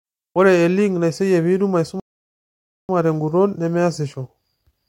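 A speech recording whose delivery halts abruptly at 2.00 s, drops into dead silence, and picks up again at 2.89 s from exactly the point where it broke off, with nothing skipped. That gap is a rebuffering stall: playback consumed all the audio it had downloaded and had to wait for more data before continuing. The pause inserts roughly 0.89 s of extra time into the clip while leaving the recorded material itself intact.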